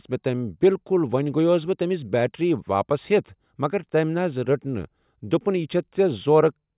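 No technical faults can be heard anywhere in the speech recording. There is nothing in the signal path that calls for comment at any point.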